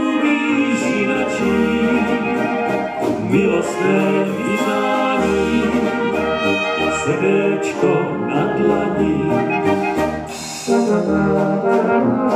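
No technical faults can be heard anywhere in this audio.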